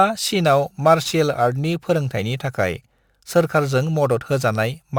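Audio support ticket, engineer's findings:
Crude rate conversion in resampler stage, 0.45–4.86 s: sample-repeat (nearest-sample) conversion with no filter, pattern consistent with 44.1 kHz to 48 kHz. Result: gritty, inharmonic fizz tracking loud and bright speech, roughly 30 dB below signal.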